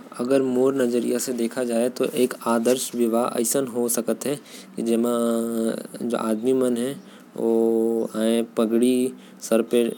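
No technical faults occur at any point in the speech.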